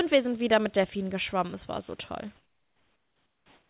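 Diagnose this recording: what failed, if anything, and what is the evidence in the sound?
From 2.36 s to the end at 3.69 s, comfort noise replaces the room background: a steady, featureless hiss about 6 dB quieter than the real background, which sat about 43 dB below the loudest speech. The stage is call processing, likely discontinuous transmission, with the receiver synthesising shaped noise during the pause. On a spectrogram the textured floor becomes a smooth, uniform band, still capped at 4 kHz by the G.711 path. The waveform shows a flat, lower envelope.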